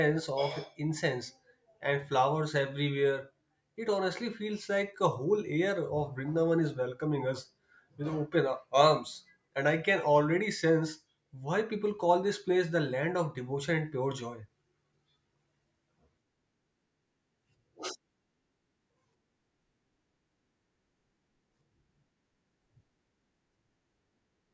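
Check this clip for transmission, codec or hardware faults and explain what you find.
Nothing to report: no fault of any kind is audible anywhere in the speech.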